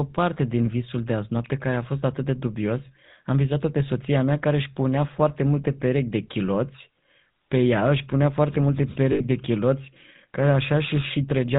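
Speech heard through the GSM full-rate codec for the whole clip. The band stops at 4 kHz, and a plainly audible buzzy, gravelly grain covers the voice, which fits a 13 kbps GSM full-rate stream. A simple narrowband phone filter would only muffle the sound, while this codec's coarsely pulsed excitation adds roughness on top. At 9.12 to 9.21 s, between "își punea foarte multe" and "de chiloți care", lost GSM frames leave an 80 ms stretch where the last good sound is held as a metallic ring instead of dropping to silence. That length fits four lost 20 ms frames.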